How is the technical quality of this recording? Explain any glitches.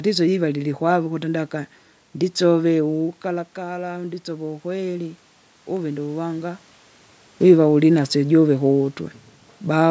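One fault stands out: automatic gain rising. From 3.28 to 6.67 s, just after "lilkwave ukuti ndaka nditsove", the talker moves away and the input drops about 10 dB. The gain control responds by slowly adding about 5 dB, so voice and room noise swell together.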